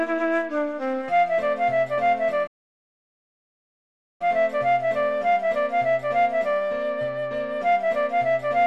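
The audio has a playback stall: at 2.47 s the sound cuts off mid-flow and the output stays silent until 4.22 s, a gap of about 1.73 s. On a waveform this shows as a dead-flat line between two stretches of normal signal; on a spectrogram it is a clean blank vertical band across all frequencies. The likely cause is the player running short of data, or its playback thread being blocked, before it recovered.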